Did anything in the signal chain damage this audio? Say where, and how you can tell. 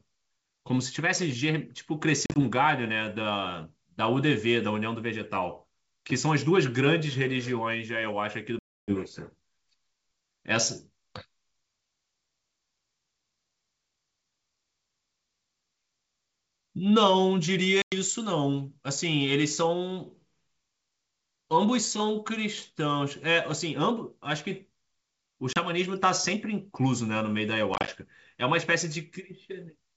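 Yes, at the network stage: packet loss on an ADPCM call, heard as hard-edged gaps at 2.26–2.40 s (70 ms lost in bursts up to 40 ms), 8.59–8.96 s (290 ms, around thirty packets), 17.82–17.94 s (100 ms), 25.53–25.58 s (30 ms) and 27.74–27.89 s (80 ms in short bursts). The waveform drops to flat silence with square edges, and the spectrogram shows blank vertical bands. Each silence desynchronises the decoder's adaptive predictor and step size, so the speech returns with brief, slight distortion that settles within tens of milliseconds. The wideband G.722 coding itself stays clean.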